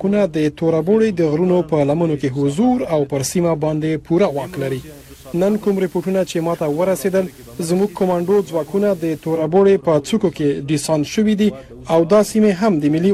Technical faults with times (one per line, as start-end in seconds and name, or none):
4.22-9.48 digital radio blending to analogue